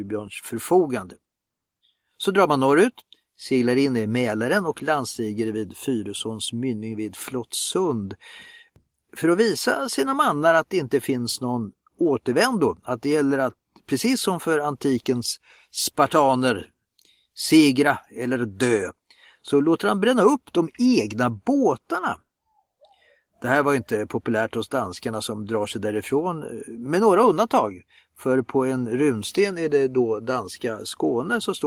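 No technical faults can be heard in this speech recording. The Opus voice compression keeps the full audio band, with only a light coding texture consistent with its hybrid mode at around 24 kbps.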